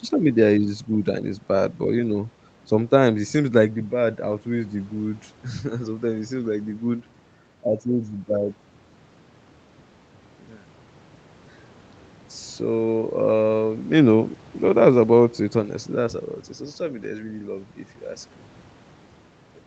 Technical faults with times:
4.31 lost packet rebuilt from error correction
17.03 lost packet rebuilt from error correction

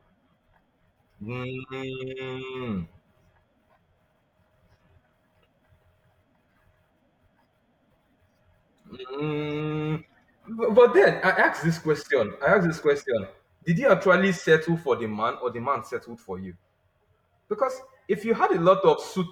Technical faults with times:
none

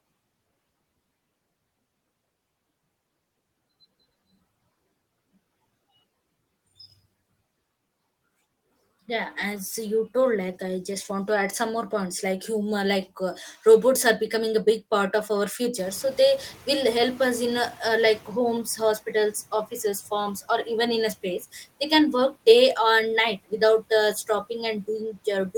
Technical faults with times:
15.77-18.62 noise suppressor catching up

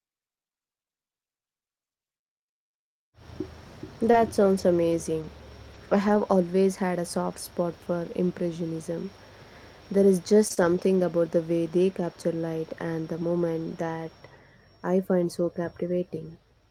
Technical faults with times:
4.05-4.15 lost packet rebuilt from error correction
4.11-4.15 short concealed packet loss
4.58-4.60 lost packet rebuilt from error correction
4.92-5.24 lost packet rebuilt from error correction
5.74-5.76 lost packet rebuilt from error correction
6.08-6.16 lost packet rebuilt from error correction
10.48-10.59 short concealed packet loss
10.50-11.01 lost packet rebuilt from error correction

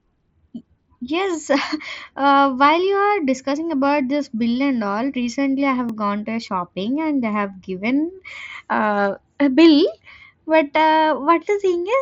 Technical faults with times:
5.89 block of digital silence

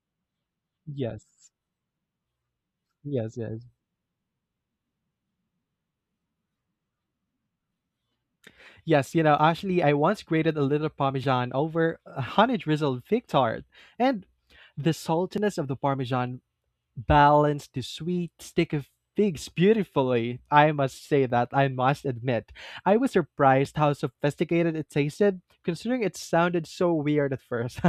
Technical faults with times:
2.98-27.78 clock drift buffer slips

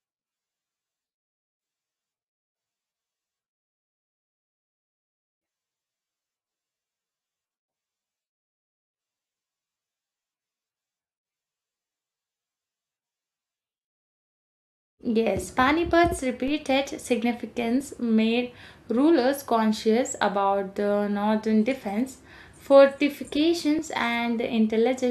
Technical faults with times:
16.48 DC step
17.81 overlap between stream segments
23.79 overlap between stream segments

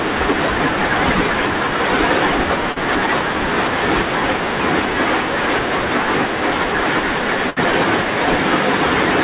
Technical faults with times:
2.72-2.78 short concealed packet loss
7.50-7.58 burst of packet loss

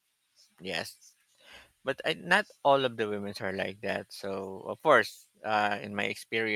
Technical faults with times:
none

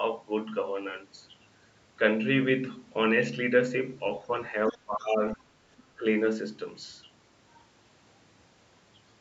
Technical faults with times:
4.15-4.19 other side's voice leaking through
4.66-5.12 other side's voice leaking through
4.71-5.59 speech suppressed in double talk
5.78-5.83 other side's voice leaking through
5.96-6.05 speech suppressed in double talk

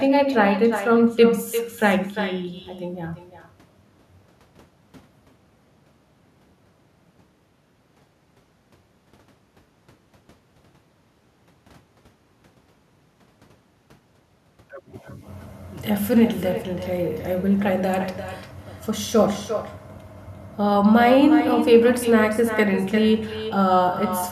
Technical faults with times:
0.00-24.31 echo with no canceller

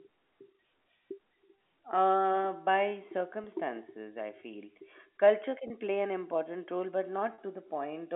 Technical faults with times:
3.44-3.46 packet loss with pitch repetition
5.68-5.70 packet loss with pitch repetition
7.34-7.38 packet loss with pitch repetition

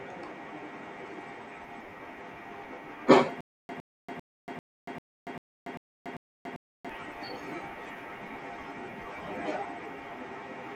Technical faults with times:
3.41-6.89 stutter with silent gaps

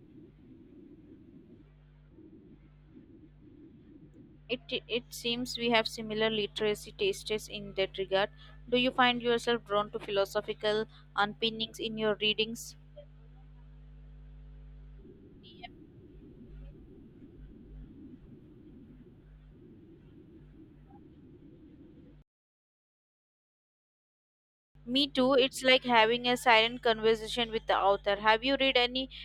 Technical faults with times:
1.69-5.10 channel delay (comb filtering)

